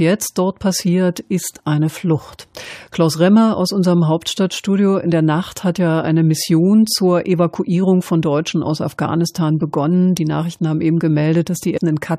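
Right near the end, at 11.76 to 11.78 s, you get compressed frames skipped: a chunk of the speech, something like 150 ms, just vanishes. The decoder dropped a run of frames, which fits a frame length of about 23 ms.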